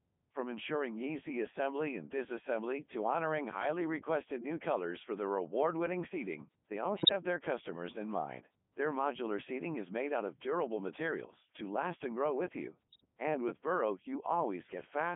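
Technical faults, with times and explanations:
Throughout: Codec 2 vocoder, robotic, buzzy speech confined to roughly 200 Hz to 3.5 kHz, because only pitch, voicing and spectral envelope at 3.2 kbit/s are resynthesised.
6.94 to 7.12 s and 12.89 to 13.06 s: bit errors on digital voice radio, sudden warbles and pitch jumps as corrupted bits, around 5 to 7 percent, scramble several frames.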